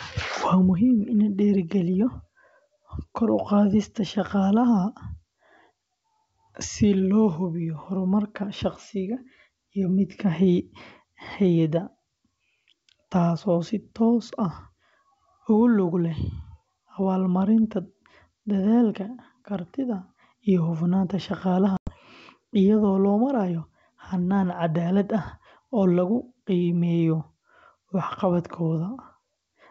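At about 21.77 to 21.92 s there's packet loss on an ADPCM call: roughly 100 ms drops to hard-edged silence, which fits around ten packets going missing. The G.722 decoder's predictor and step size lose track of the sender, so the speech comes back with a bit of distortion before settling.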